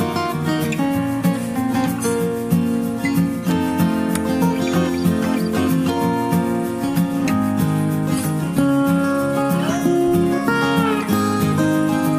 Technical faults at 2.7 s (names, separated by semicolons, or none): none